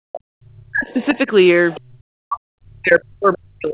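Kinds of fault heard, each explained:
Speech suppressed in double talk: the echo canceller likely mistook overlapping talk for echo and turned the speech down, by roughly 40 dB at worst, from 0.06 s and again from 1.83 s.
Other side's voice leaking through: the echo canceller likely left residual loudspeaker sound in the microphone, heard as brief faint scraps around 1.02 s and 1.73 s, well below the speech.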